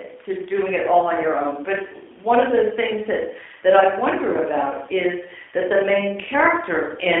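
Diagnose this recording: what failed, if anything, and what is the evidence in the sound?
The speech sounds boxed-in, slightly rough and synthetic for its whole length, with nothing above about 3.5 kHz and little below 250 Hz. That is damage from the G.729 codec stage, which fits an 8 kbit/s G.729A encoding. The codec does not store the waveform. It models each 10 ms frame with a vocal tract filter, a pitch predictor and a few pulses, so the rebuilt speech loses natural texture and carries a mechanical edge.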